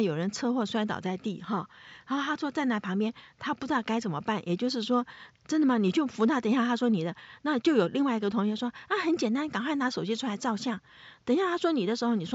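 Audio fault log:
Nothing to log here, just a quiet bit of room noise sitting about 46 dB under the speech, which is simply part of the recording.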